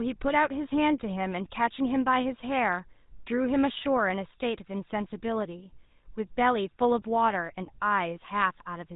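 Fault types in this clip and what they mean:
GSM full-rate codec: The audio passes through the original GSM speech coder throughout, which fits a 13 kbps stream. It models the vocal tract and drives it with a sparse, regularly spaced pulse excitation, and cuts everything above 4 kHz, giving a plainly audible buzzy, gravelly roughness across the speech.
lost GSM frames: Between 7.66 and 7.70 s, a damaged stretch was filled by repeating the last good frame's settings, consistent with one missing 20 ms frame. This is heard as a brief rough, metallic ring in the speech before normal decoding resumes.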